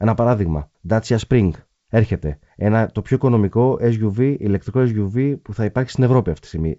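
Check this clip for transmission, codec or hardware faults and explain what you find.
No transmission, codec or hardware faults are audible; the speech carries the expected G.722 wideband telephone coding at 64 kbit/s, with the band ending at about 7.7 kHz.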